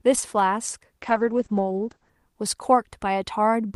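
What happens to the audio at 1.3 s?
At 1.3 s the speech is inside a call bitrate drop, running from 1.02 to 2.17 s. The encoder is starved of bits, consistent with a fall from around 40 to 9 kbps. Coding turns coarse. Highs above 8 kHz vanish. The speech sounds muffled and rough.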